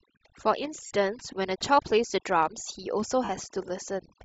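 A speech recording marred by overdone noise removal throughout. The background drops and breaks up into twinkling specks, and quiet parts of the voice vanish with it. Bands near the noise estimate are pulled almost to nothing. The whole clip also carries a breathy, grainy edge on the voice, which is plainly audible. The upper spectrum sounds sparse and noise-filled, as a low-bitrate codec leaves it. This is likely Bluetooth LC3 compression, and the texture fits 7.5 ms frames at around 32 kbps. Two dropouts come from lost LE Audio frames, at 0.87 to 0.91 s and 3.24 to 3.29 s. Each gap lasts roughly 40 ms. In each one the decoder repeats the last sound with scrambled phase, so the voice smears into a brief noisy blur.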